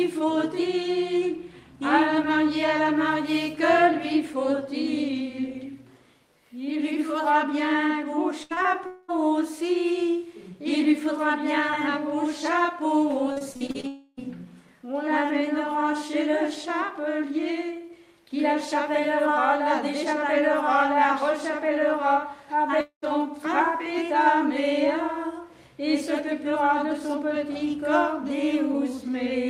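Repeated packet loss (robotic sound) hits twice: at 8.43 to 8.66 s, three gaps up to 74 ms long leave about half the span concealed, and at 13.32 to 13.85 s, seven shorter gaps up to 40 ms conceal roughly 39%. The receiver patches each hole by extending the last sound, so these stretches turn choppy. Three longer holes follow, at 8.86 to 9.10 s, 13.87 to 14.19 s and 22.81 to 23.04 s, each about 0.2 to 0.3 s, where the sound stretches into a fading buzz or hiss. The last one drops to silence for about 0.11 s before resuming without the lost material, all pointing to a likely long network dropout.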